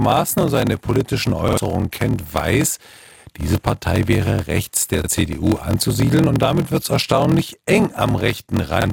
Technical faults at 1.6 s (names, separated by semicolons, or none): block size mismatch (padded); repeated buffer